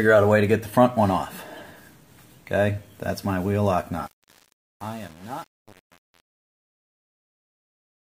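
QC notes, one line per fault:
4.06–8.10 s, truncation distortion on a fade: the fade runs through a digital gain stage that keeps too few bits and adds no dither, and the stepping fits a stage holding about 7 bits. As the level drops toward the smallest available step, the waveform collapses into a handful of square levels, so the tail of the fade turns gritty instead of fading smoothly. The distortion lasts the whole span from 4.06 s to the end.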